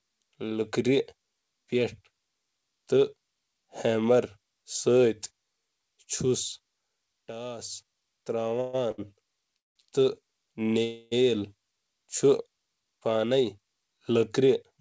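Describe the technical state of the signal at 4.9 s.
At 4.9 s the speech is intact, with no dropout, click or distortion, only the steady band limit of the G.722 call path, which leaves nothing above 8 kHz.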